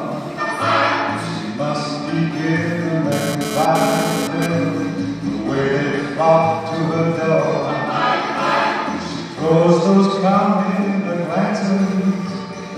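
From 3.12 to 4.46 s a hard, raspy buzz cuts in at about 6 dB below the main sound, pitched at 216.7 Hz with a dense stack of harmonics and no relation to the audio around it. This is GSM phone buzz: a nearby 2G handset transmitting in bursts at that rate, and the audio circuitry rectifying the radio pulses into the signal path. The short, isolated burst fits a data transfer rather than a steady call.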